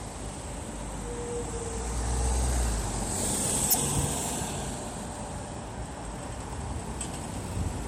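At 3.67 s, damaged data in the compressed stream produces a brief glitch lasting about 0.08 s. The corrupt frames throw the decoder out of sync, so it has to search for the next frame header.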